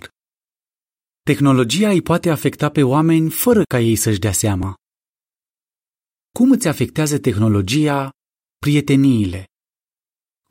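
At 4.63 s the speech has a small skip caused by an overlap between stream segments. The timestamps of two adjoining pieces of the stream claimed the same stretch of time, so the player discarded the overlap. That cut roughly 17 ms of real audio and left the waveform jumping straight to a later point. The timing fits a boundary between 4-second segments. Unlike a dropout, nothing is replaced by silence, so there is no gap to hear, only a sudden splice.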